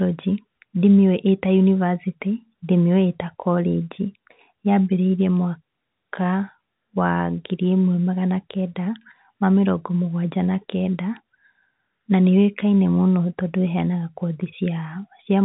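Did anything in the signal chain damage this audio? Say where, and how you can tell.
No, nothing in the chain has damaged this speech; it carries the band-limited sound of G.711 telephone coding, with nothing above about 3.9 kHz.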